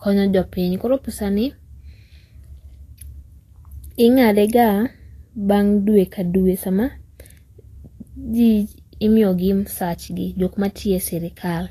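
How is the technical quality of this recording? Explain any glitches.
The technical quality is fair, with one fault: Vorbis compression throughout the speech. Nothing is heard above 14.2 kHz. The treble sounds hissy and grainy, and consonant attacks are blurred. The likely cause is low-quality Vorbis encoding, where fine upper detail becomes noise. The damage is plainly audible and fits a bitrate near 35 kbps.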